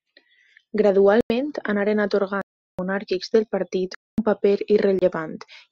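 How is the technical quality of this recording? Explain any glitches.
The recording is marred by four dropouts, each a block of digital silence, at 1.21 to 1.30 s, 2.42 to 2.79 s, 3.95 to 4.18 s and 4.99 to 5.02 s. Samples were zeroed, likely because the output buffer wasn't filled in time; the first and second gaps fit 4096- and 16384-sample blocks. Each is heard as a hole in the speech, a flat line on the waveform, and a blank vertical band on the spectrogram.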